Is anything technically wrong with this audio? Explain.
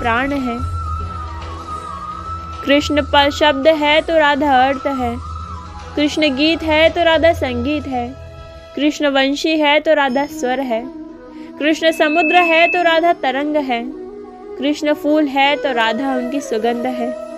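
Yes. From 11.86 to 12.91 s there is loudspeaker feedback squeal: a mic-speaker loop exceeds unity gain at 2.6 kHz, so a pure tone swells over roughly 0.4 s to about 5 dB above the audio. It appears as a bright horizontal line on a spectrogram and a growing envelope on the waveform.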